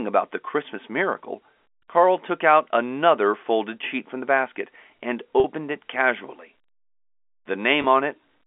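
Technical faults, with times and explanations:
5.40–5.44 s and 7.82–7.84 s, packet loss with pitch repetition: the speech briefly hangs on a held, slightly buzzy tone before carrying on, for about 40 ms at the first point and 20 ms at the second. Audio went missing in transit, which fits two lost 20 ms packets and then one. The receiver filled each gap by repeating the last pitch period, and both gaps were too short for that repetition to fade into silence.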